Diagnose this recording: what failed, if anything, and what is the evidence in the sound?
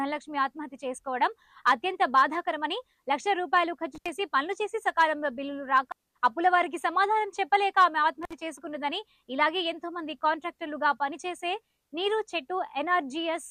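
Intermittent contact at 3.95 to 4.09 s and 8.23 to 8.33 s, in the analogue wiring. A loose cable or plug briefly loses connection, for about 78 ms and then 55 ms. The sound drops out with crackle at each edge, leaving faint hiss.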